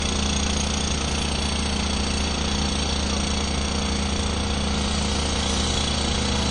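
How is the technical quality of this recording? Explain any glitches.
The technical quality is compromised by plainly audible codec damage throughout.

WMA compression, likely, runs from start to finish. A transform codec spreads quantisation noise across long blocks, so the sound rings and washes, hiss breathes with the signal, and nothing survives above 10 kHz. This fits a bitrate around 32 kbps.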